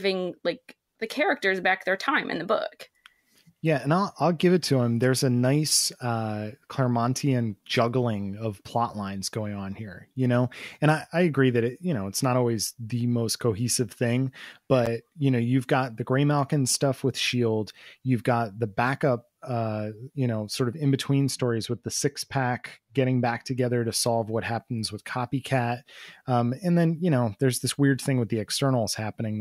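A speech clip in which, from 21.27 to 23.58 s, between "sort of in between" and "to solve what happens", the sound turns dull and muffled, the mark of de-emphasis applied wrongly: a treble cut meant to reverse pre-emphasis hit audio that never had any, or was applied twice, leaving 10 kHz about 8 dB down relative to 1 kHz. On a spectrogram, the upper bands fade along a smooth downward slope for just that stretch, while the waveform barely changes.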